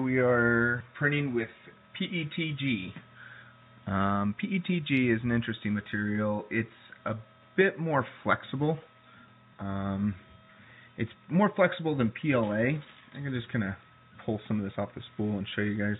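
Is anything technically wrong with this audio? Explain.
No, nothing is technically wrong with this audio.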